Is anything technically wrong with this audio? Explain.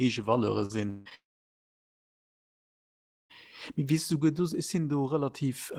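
Yes. This speech clip has two kinds of network fault, clustered in its first few seconds.

Short concealed packet loss occurs at 0.65–0.71 s and again at 1.09–1.13 s. About 40 ms, then about 20 ms, of the stream failed to reach the decoder in time. The receiver covered each gap by extending the preceding sound and crossfading back into the real signal. The result is a brief smear or wobble. On a spectrogram, each gap shows as a short patch of flattened, repeated harmonics or smooth noise with a visible join at each edge.

A long network dropout appears at 0.89–1.07 s and again at 1.15–3.32 s. Audio stopped arriving, likely from a stall in the connection. Throughout the first, 160 ms gap, the decoder kept synthesising a continuation of the last sound, heard as a fading buzz or hiss. In the second, about 2.2 s went missing. The continuation faded out quickly, leaving roughly 2.1 s of silence. 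The waveform collapses to a flat line there, and a spectrogram shows a blank band before the speech resumes without the lost portion.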